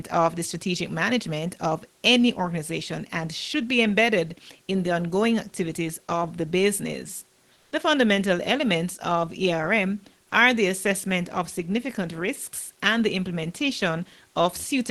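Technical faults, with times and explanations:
7.53 to 7.71 s, comfort noise in place of the background: right after "activities of the business", the pause is filled for about 180 ms by a steady, featureless hiss about 4 dB quieter than the room background, which sits about 37 dB below the loudest speech. The likely cause is Opus discontinuous transmission, where the receiver synthesises noise during the gap. No speech is clipped, which separates this from a voice-detector dropout.
10.29 to 10.31 s, sound dropped by the voice detector: just before "are the assessment of", about 10 ms of sound gives way to a 20 ms patch of flat synthetic noise. This likely comes from Opus discontinuous transmission, which treated the quiet sound as background and stopped sending. Unlike the comfort noise at 7.5 s, real sound is lost here, not just room background.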